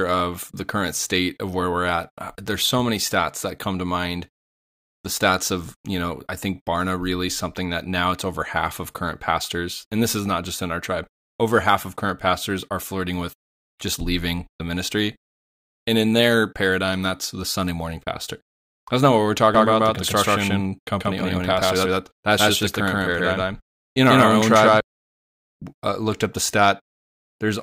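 From 19.55 s to 24.81 s the speech carries a doubled audio track. A second full-band copy runs about 150 ms behind the first, at roughly the same level. It has no decay or room colour, so it sounds like a hard, clean slapback rather than an echo. It appears and vanishes abruptly at both ends. The likely cause is a second capture of the same signal through a slower path.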